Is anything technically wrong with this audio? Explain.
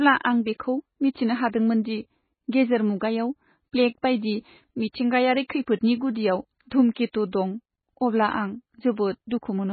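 Yes. Throughout the speech, heavy MP3 compression is likely. Nothing survives above 4.6 kHz, and starved frequency lines flicker, giving a watery, swirly sound. This fits a very low bitrate around 16 kbps.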